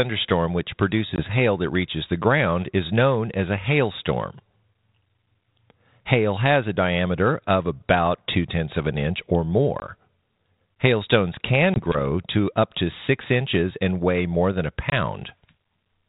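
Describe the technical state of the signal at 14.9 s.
Packet loss on an ADPCM call occurs at 14.90 to 14.93 s, just after "weigh more than a". About one packet, 20 ms, drops to silence, leaving a hard-edged gap. The 32 kbit/s G.726 decoder's predictor and step size lose sync, so the speech resumes disturbed before settling.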